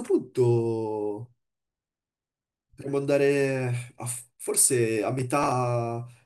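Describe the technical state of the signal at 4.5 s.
At 4.5 s the speech signal is intact, with no audible dropout, distortion, glitch or other technical fault at that point.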